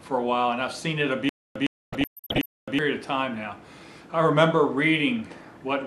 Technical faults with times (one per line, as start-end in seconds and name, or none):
1.29-2.79 stutter with silent gaps
1.92-2.46 DAB burbling